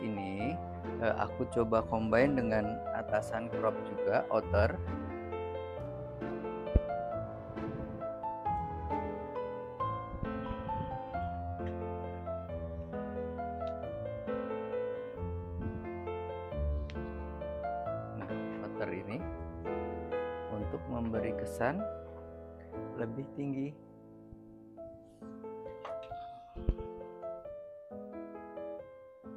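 Nothing stood out on listening; no audible technical problem turns up anywhere in the recording.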